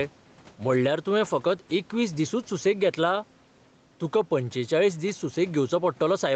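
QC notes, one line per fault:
Throughout: gain pumping. The level is pulled down on each loud stretch of speech, moving by around 5 dB, so loud and soft passages end up squashed close together. The likely cause is input gain set far too high, with a fast limiter pulling it back on every peak. Unlike a noise gate, which cuts the background out, this turns the gain down rather than muting.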